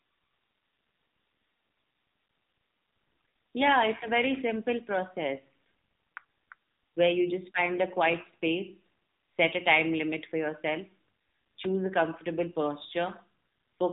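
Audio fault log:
throughout: AMR narrowband mobile codec. The speech has passed through the AMR-NB codec used on 2G and 3G calls, which samples at 8 kHz and rebuilds each 20 ms frame from a vocal-tract model excited by a handful of pulses. Nothing above 3.8 kHz survives, so sibilants and airiness are gone, and the plainly audible buzzy, synthetic texture suggests one of the codec's lower modes, around 7.4 kbps.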